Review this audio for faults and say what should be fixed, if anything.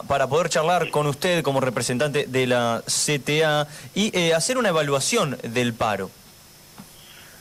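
Nothing needs fixing, since the review turns up no faults in this audio.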